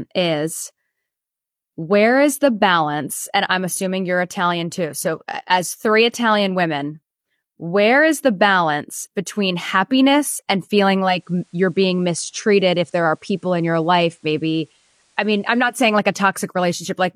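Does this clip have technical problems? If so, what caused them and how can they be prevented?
Yes. From 10.97 to 15.88 s, just after "balance between happiness and" and until "like a", the speech gains a faint hiss well below the voice and drops about 1 dB. This is digital radio blending to analogue: the receiver lost the digital stream and cross-faded over 304 ms to the station's FM broadcast, then faded back. Better reception, such as a stronger antenna or siting, or a clean digital feed, would prevent it.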